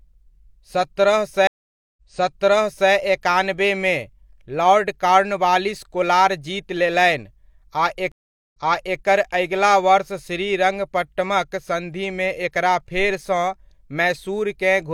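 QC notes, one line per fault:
1.47–2.91 s and 8.12–8.99 s, stream reconnect: the audio drops out for 0.5 s and then 0.41 s as the connection breaks and the player reconnects with a fresh decoder. The server resends a burst, so the speech resumes 0.94 s and 0.47 s earlier than where it stopped, and a stretch is heard twice. Each restart fades in on its first frame.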